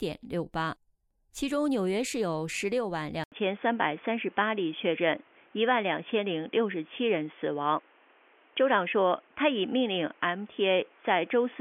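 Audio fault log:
3.24 s to the end, input switched to a poorer device: capture likely moved to a narrower-band input after an 80 ms silence, so nothing above 3.4 kHz survives, the sound turns dull and boxy, the level shifts modestly, and faint new background noise appears.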